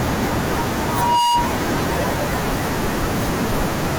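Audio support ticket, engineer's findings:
Mic-to-loudspeaker loop gain above unity at one frequency, likely monitor or PA too close to or aimed at the mic. Result: loudspeaker feedback squeal, 0.82–1.59 s. Steady 955 Hz tone swelling over under half a second, peaking about 5 dB above the speech, then cut. Fix: reduce gain, reposition, or notch 955 Hz.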